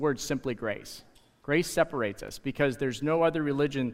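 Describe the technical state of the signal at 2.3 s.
An electrical switching spike sits at 2.28 s, a sharp snap lasting only a few milliseconds and laid over the underlying audio. The likely cause is a brief arc from a nearby switch, motor or static discharge, coupling a burst of energy into the audio line. The transient stays fairly quiet, peaking around -35 dBFS, so it registers as a small, dry tick rather than a loud crack.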